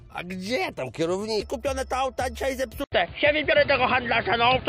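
At 1.41 s a brief glitch of damaged data in the compressed stream produces a disturbance lasting under 20 ms. Corrupted frames there are misread and the decoder loses sync for an instant.

From 2.84 s to the end, the sound turns dull and boxy after a silence of 80 ms, with nothing above 4.8 kHz, a level shift of a few decibels and a new background noise roughly 30 dB below the signal. This is likely the input switched to a poorer device. A spectrogram shows a gap followed by a hard ceiling at 4.8 kHz, and the waveform shows a flat gap and then a changed amplitude.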